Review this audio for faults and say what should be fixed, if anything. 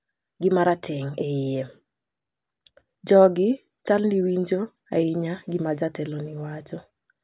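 No faults found; nothing to fix.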